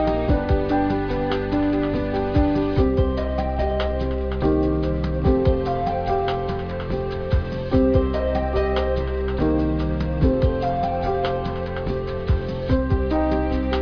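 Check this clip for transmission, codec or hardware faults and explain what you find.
Nothing faulty can be heard anywhere in this recording.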